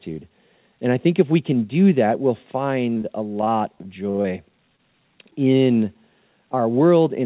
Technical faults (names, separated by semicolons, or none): short stall from a late packet; short concealed packet loss; repeated packet loss (robotic sound)